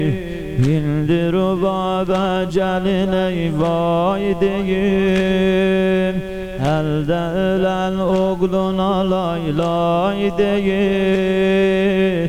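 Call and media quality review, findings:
No audible transport, device or processing defects found; signal level, continuity and bandwidth remain steady across the recording.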